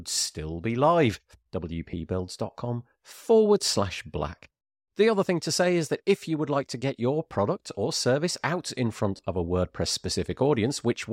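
Lost LE Audio frames at 1.91 s, 4.53 s and 9.17 s: the LC3 decoder repeats the last spectrum with random signs, smearing 20 ms, 90 ms and 20 ms into noise. Spectrogram tonal lines blur there; the 90 ms gap's waveform decays toward silence.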